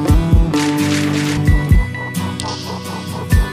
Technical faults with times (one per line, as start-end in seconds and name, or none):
1.37 damaged data in a compressed stream